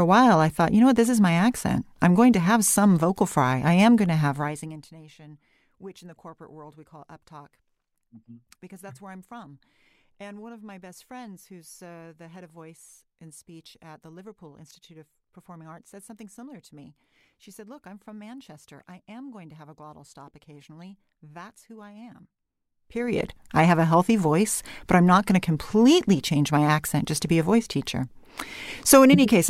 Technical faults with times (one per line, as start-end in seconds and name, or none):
4.24-4.92 zipper noise
22.72-23.24 zipper noise